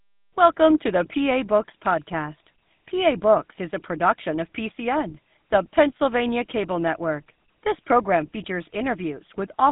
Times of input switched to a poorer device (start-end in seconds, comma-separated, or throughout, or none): none